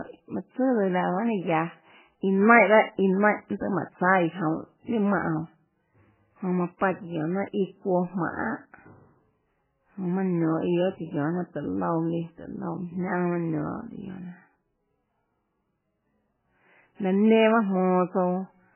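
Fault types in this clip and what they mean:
MP3 compression: likely a starved MP3 encoder, pointing to roughly 8 kbps, cutting everything above 3 kHz and leaving the speech dull, watery and swirly throughout.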